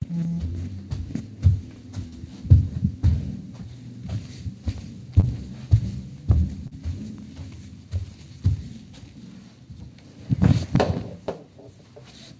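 Short concealed packet loss hits at 2.08–2.15, 5.20–5.26 and 6.67–6.74 s. Each time, 40 ms never arrived and the receiver extended the preceding sound, causing brief smears or wobbles. Spectrograms show smoothed, repeated texture ending below 8 kHz; waveforms show a looped-looking patch.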